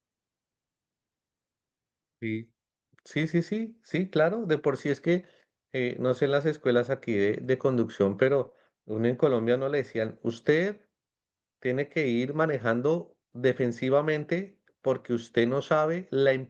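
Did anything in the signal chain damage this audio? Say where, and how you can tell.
Yes. The damage happened on the network side of the call path, where Opus at 32 kbps with a 12 kHz audio bandwidth carried the speech.

Lost packet rebuilt from error correction: at 6.11 to 6.17 s, about 40 ms of the audio, which fits two consecutive 20 ms packets, turns rough and noisy but never drops out. A single rebuilt frame at 8.45 s sounds the same way. The decoder replaced the missing packets with the low-bitrate backup copies carried in the packets that followed them. On a spectrogram these stretches show blurrier, noisier harmonics, and the waveform stays continuous.

Short concealed packet loss: right after that, from 8.49 to 8.53 s, about 20 ms of audio never arrived in time, and the receiver filled the hole by extending the preceding sound. It comes across as a brief smear or wobble. A spectrogram shows the last spectral shape stretched flat across the gap before the real audio blends back in, and the waveform shows a short repeated or decaying pattern at that point.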